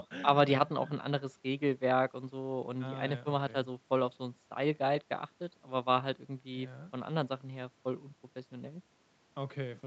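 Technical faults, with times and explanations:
Nothing stood out on listening to this speech, which sounds as expected for audio that has passed through a call's microphone processing.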